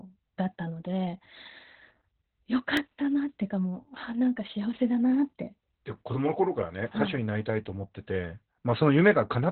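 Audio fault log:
throughout: Opus voice compression. The speech sounds muffled, hoarse and slightly robotic because the codec runs in its SILK linear-prediction mode with the band cut to narrowband. Nothing survives above about 4.3 kHz, and the excitation is coded very coarsely, which points to a bitrate near 8 kbps. On a spectrogram, all energy stops at a hard ceiling around 4.3 kHz. Below it, the harmonics look smeared and blotchy rather than cleanly striated.
2.77 s: block of digital silence. About 1.9 ms of samples drops to silence, with no fade in or out, so the abrupt jumps at both edges produce a tick or dip rather than an audible gap. On the waveform this shows as a tiny near-silent stretch inside the speech. On the spectrogram it shows as a thin vertical stripe of broadband energy reaching the top of the band.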